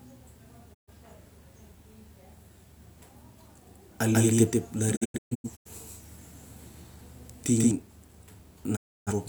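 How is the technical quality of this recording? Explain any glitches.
The recording has two kinds of glitch: the sound repeatedly cuts out, and for a few seconds it is heard twice.

Digital broadcast dropout occurs three times. From 0.73 to 0.93 s the speech fades out over about 20 ms, goes silent, and returns. From 4.95 to 5.71 s it breaks into several short holes, the longest about 128 ms. From 8.75 to 9.12 s there is another gap. In each case the receiver had lost the signal or was rejecting corrupted frames, so it muted until clean frames arrived, and that stretch of speech is gone.

From 4.13 to 7.71 s the speech has a doubled audio track. A second full-band copy, roughly as loud as the first, trails it by about 150 ms. There is no reverb tail or room colour, and the copy cuts in and out abruptly. The likely cause is the same signal being mixed in twice, either through a slower second path or from two misaligned copies in an edit.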